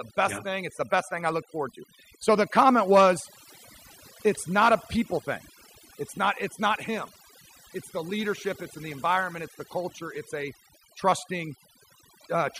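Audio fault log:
throughout: overdone noise removal. Noise reduction applied too aggressively cuts individual frequency bands to near zero whenever they approach the estimated noise floor. Quiet speech components are removed along with the noise, leaving a lowered background that breaks up into twinkling specks.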